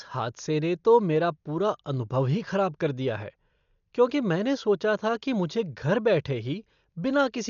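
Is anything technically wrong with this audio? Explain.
Yes. Throughout the speech, nothing sounds above 6.9 kHz, and a rough, fluttering noise clings around tones. This is likely Dolby Digital compression, at a rate that fits roughly 48 kbps. Starved frequency lines are filled with dither noise rather than silence, which a plain low-pass filter wouldn't produce.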